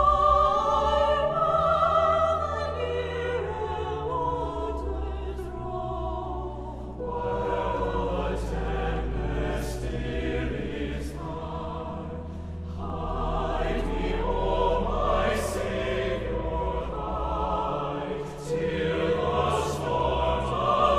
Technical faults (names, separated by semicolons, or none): dropped samples